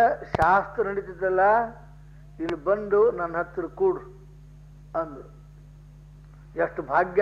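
At 0.35 to 0.45 s a loud pop arrives as two sharp thumps in quick succession, standing well above the surrounding level, and a single, somewhat smaller pop follows at 2.49 to 2.52 s. Each is a voltage step or pulse, likely from a plug, switch, static discharge or driver glitch, shaped by the circuitry after it. Unlike a dropout or glitch in the data, the audio keeps running uninterrupted beneath each pop.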